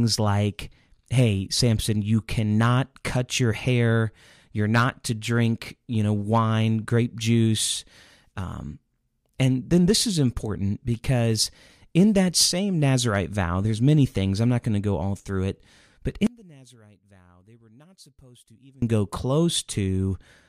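A speech recording in which, from 16.27 to 18.82 s, one stereo channel was most likely inverted in polarity, so when the two channels are summed to mono the material they share cancels out. The centred voice and its low end nearly disappear, with the level dropping by about 29 dB for those two and a half seconds, leaving only a faint residue of the difference between the channels until full level returns at 18.82 s.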